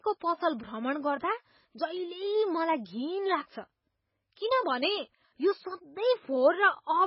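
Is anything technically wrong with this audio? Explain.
Yes. Throughout the speech, nothing is heard above about 5.5 kHz, and the sound is watery and swirly with smeared consonants. This is likely MP3 compression at a very low bitrate, roughly 16 kbps, where the encoder drops the treble and lets weak frequency lines flicker between frames.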